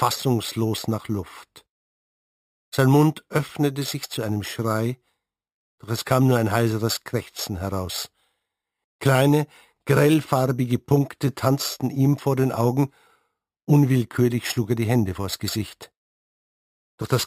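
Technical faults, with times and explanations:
Throughout: imaging from sample-and-hold upsampling. Each sample is held unsmoothed, pointing to 12 kHz audio raised to 48 kHz. A mirrored copy about 18 dB down fills 6 kHz to 12 kHz as level-following metallic fizz. The spectrogram shows that inverted band, and the waveform looks staircase-stepped.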